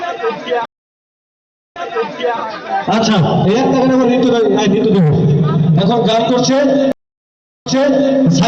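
Two stream reconnects break the audio: silence from 0.65 s for 1.1 s and from 6.92 s for 0.74 s, shown as flat waveform gaps, then replay resuming 0.62 s and 0.5 s earlier.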